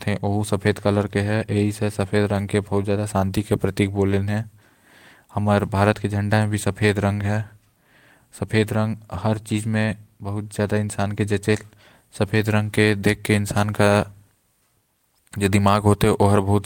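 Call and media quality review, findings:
Nothing to flag on this speech clip; no faults turned up anywhere in the audio, so there's no ticket to open.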